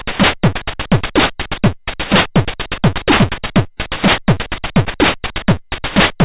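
No technical faults can be heard anywhere in this recording of sounds; the signal stays intact and continuous throughout.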